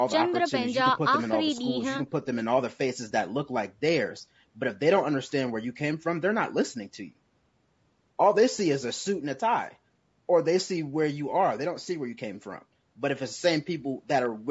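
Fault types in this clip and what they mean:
Low-delay AAC compression: grainy, rough speech with noise between harmonics, likely AAC-ELD around 32 kbps; unlike plain bandlimiting, the texture itself degrades.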